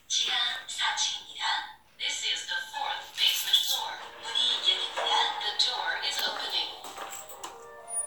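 No technical faults turn up anywhere in this recording of sounds. Nothing in it calls for a timestamp or a repair.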